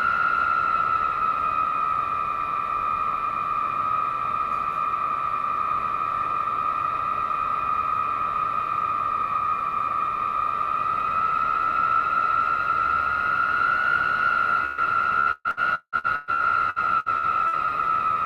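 At 14.65 s there's a burst of packet loss: about 120 ms goes missing, and the receiver stretches the last bit of sound and fades it before things jump ahead. Then from 15.2 to 17.67 s, repeated packet loss gives a choppy, robotic texture, with around a dozen patched holes (the longest about 177 ms) covering roughly 38% of that stretch.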